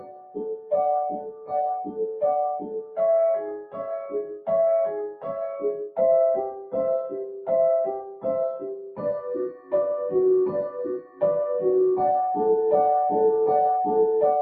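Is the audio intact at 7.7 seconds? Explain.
No. At 7.7 s you're inside a stretch from 6.51 to 9.73 s where the sound is cut by the noise suppressor. It treats that steady or fading material as noise and pulls it down by up to about 13 dB, so decays get clipped short while sharp hits still come through, adding up to roughly a second and a half of dipped audio. That sits on top of a noise suppressor applied to music or sounds across the whole clip, swinging the level by around 15 dB and leaving the sound pumping and thinned out.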